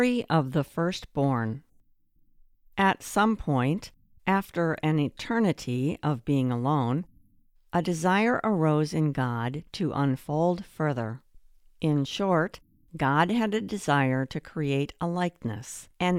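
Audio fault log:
No faults found in the speech audio on review; nothing to log.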